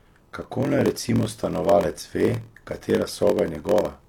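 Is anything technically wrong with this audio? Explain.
Yes, there's a block size mismatch (padded) running through the whole speech clip. One stage hands over blocks shorter than the next stage reads, and the leftover space in each block gets filled with silence. The 43.1 Hz buzz points to a 1024-sample read block, with a tiny gap dropped into every block. All those gaps stretch things out, so the speech plays at about 0.938 times normal speed.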